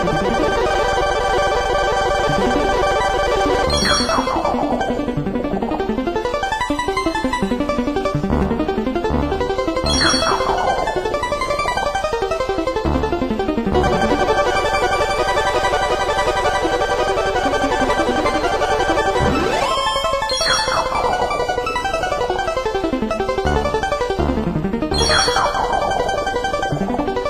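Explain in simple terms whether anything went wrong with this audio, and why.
Compressed frames skipped: the player dropped whole chunks of the compressed audio, each about 23.2 ms long. At 10.68 s roughly three chunks vanish, about 70 ms of sound, and at 19.74 to 19.76 s about one. The sound jumps forward.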